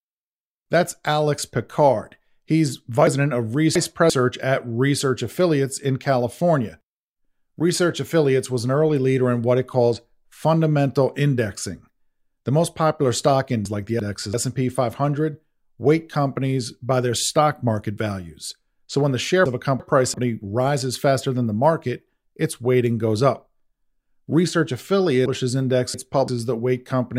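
Chunks out of order: roughly 340 ms blocks of speech were delivered late and played after later audio, producing jumbled moments at 3.07–4.10 s, 13.65–14.34 s after "most popular stock", 19.46–20.14 s between "when the share" and "rises faster than the", and 25.26–26.28 s.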